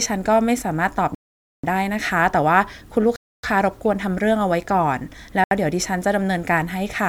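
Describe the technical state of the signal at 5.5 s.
At 5.5 s the speech drops to silence from 5.44 to 5.51 s, about 72 ms, then resumes. This points to a Bluetooth stall: interference likely delayed packets until the headphone buffer emptied. Unlike a glitch, nothing is garbled.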